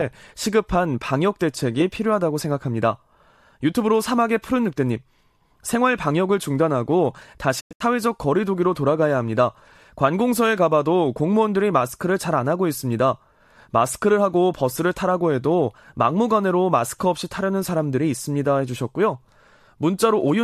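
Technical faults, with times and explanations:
7.59–7.82 s, digital broadcast dropout: corrupted or missing frames made the receiver mute the speech in short holes totalling 168 ms across 192 ms, the longest 96 ms, each with 20 ms fades. The waveform shows flat, taper-edged gaps, and the spectrogram shows blank vertical bands.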